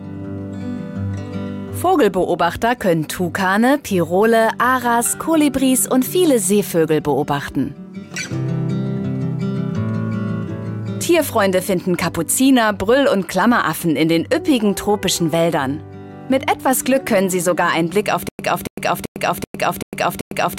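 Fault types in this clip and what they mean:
Stutter with silent gaps: the playback or stream likely stalled from 18.29 s, and on each retry it replayed its last fragment before running dry. From there to the end, a 280 ms burst of sound repeats six times, each followed by about 105 ms of digital silence, giving a steady cycle of roughly 385 ms. Whatever should have played during those final two seconds is missing, replaced by the looping fragment.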